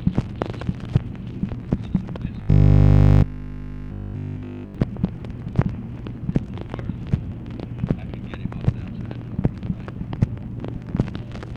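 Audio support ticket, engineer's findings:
Robotic sound from repeated short buffers, 2.43 to 4.75 s. Rigid 50 Hz buzz throughout. Likely starved input, one 20 ms buffer replayed while fresh audio is dropped.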